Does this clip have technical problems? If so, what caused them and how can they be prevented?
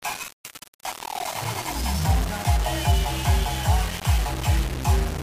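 Yes. Low bit depth without dither is present throughout. A grainy, gritty distortion follows the sound, sitting roughly 10 dB below it, and quiet moments break up and sputter. This likely comes from rounding to about 4 bits with no dither, which leaves errors that track the signal. Prevent it by keeping a higher bit depth and adding dither before any reduction.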